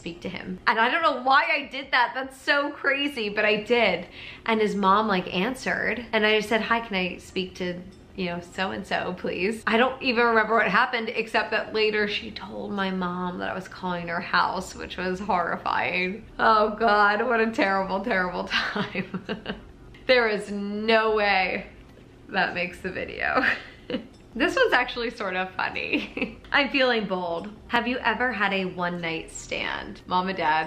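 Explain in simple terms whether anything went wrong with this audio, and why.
At about 27.76 s there is a block of digital silence: for roughly 2 ms the sound drops out and then returns. Because it stops and restarts instantly, with no fade, the gap is far too short to hear as a hole and comes across as a single tick. The likely cause is the playback program failing to fill its output buffer in time. A lone, clean cut to silence like this is what separates it from crackle, which is rough and repeated.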